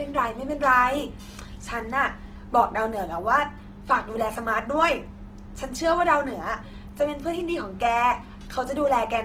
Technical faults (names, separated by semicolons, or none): Opus compression